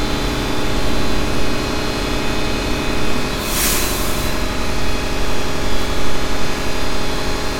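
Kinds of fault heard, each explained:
No technical faults heard.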